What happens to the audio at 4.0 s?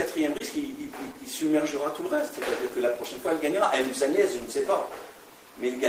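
Around 4.0 s you're in the middle of repeated timing corrections running from 0.2 to 5.54 s: the receiver keeps repeating tiny slices, playing at about 98% speed. Underneath is clock drift between sender and receiver, with the sender's clock running about 3% slow, so the buffer keeps draining and gets padded, adding roughly a tenth of a second overall.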